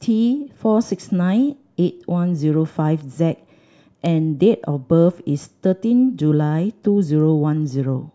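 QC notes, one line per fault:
0.91–7.20 s: word clock ticks. About seven sharp ticks come roughly once a second. Each is an unlocked receiver slipping one sample, which fits a clock error near 70 ppm.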